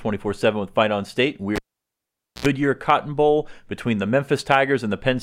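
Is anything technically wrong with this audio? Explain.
Yes. From 1.56 s to 2.46 s the speech cuts out with a pop, drops to near silence for about 0.85 s, then a short 60 Hz buzz lasting roughly 72 ms flares up before a second pop brings the sound back. This is a cable pulled and plugged in while live: the first pop is the contact breaking, the gap is the disconnected line, and the buzz is mains hum picked up while only the plug tip touched before full contact returned.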